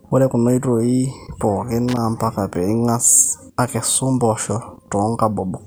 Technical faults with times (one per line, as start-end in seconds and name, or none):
1.88-1.97 loose connector crackle